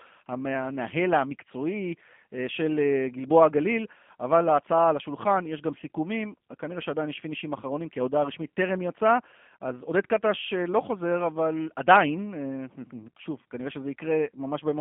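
From start to end the speech passes through the G.729 codec, consistent with an 8 kbit/s VoIP path. A line band of 200 Hz to 3.4 kHz removes low warmth and upper detail. Speech is rebuilt from a filter model and sparse pulses, so it sounds plainly rough and synthetic.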